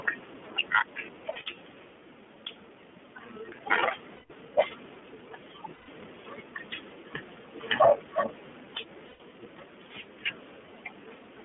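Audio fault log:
Throughout: gain pumping. The level swings by roughly 5 dB, so loud and quiet passages sit unnaturally close in level and the speech sounds squashed. The likely cause is an input gain set far too high, with a fast limiter or compressor clamping down on every peak and then letting the level float back up in the gaps.
Throughout: iLBC codec. The speech is confined to a telephone band of about 150 Hz to 3.4 kHz, so nothing above it reaches the listener, and the codec damage is plainly audible. Each 20 ms frame has its excitation coded independently, giving the voice a slightly rough, synthetic grain. That character points to iLBC running at around 15.2 kbps.
1.32–1.38 s, 4.16–4.31 s, 5.74–5.90 s, 9.08–9.21 s: lost iLBC frames. The gaps last 40 ms, 140 ms, 140 ms and 120 ms. During each one the decoder fills the hole by repeating the last pitch cycle blended with noise, which sounds like a held, faintly buzzy or breathy vowel. 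In the longer gaps it fades as the loss goes on. Because every iLBC frame decodes on its own, normal speech returns almost immediately after each gap.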